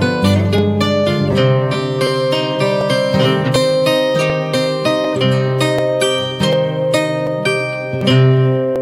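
From 0.58 s to 8.76 s a click or pop recurs at a steady interval of 0.74 s, about ten in all. This regularity points to clock drift buffer slips, likely caused by two devices running on separate clocks that disagree by roughly a tenth of a percent. The buffer between them creeps until a short block of a few tens of samples is dropped or repeated, and each jump produces one click.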